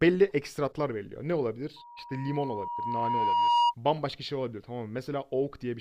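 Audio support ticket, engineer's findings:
Loudspeaker feedback squeal, 1.76–3.75 s. Mic picking up its own monitor/PA output, loop gain above unity at 953 Hz. Pure tone swells over roughly 2 s to around 10 dB above the speech, then drops out at 3.75 s.

Audio missing between chunks, 1.99 s. Brief skip of a few milliseconds, both sides spliced with no silence, heard under the rising squeal. Likely about 7 ms dropped at a capture or processing chunk boundary, with a 2 s chunk period.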